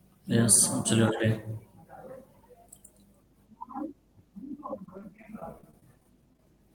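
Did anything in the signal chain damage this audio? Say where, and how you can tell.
Yes, two stages left marks. The first is in the analogue wiring. A steady low tone at 50 Hz sits under the speech for the whole clip. It stays roughly 35 dB below the speech, so it is faint but constant. A tone locked to 50 Hz points to mains hum. A ground loop or a nearby transformer is coupling the power line into the signal before it is digitised.

The second is on the network. From 4.83 s to 6.39 s the speech turns choppy and robotic. It is broken by many short holes, close to twenty, the longest about 21 ms. About 13 percent of that stretch is patched rather than real sound. This is repeated packet loss. Packets kept arriving late or not at all. The receiver filled each hole by stretching the last sound.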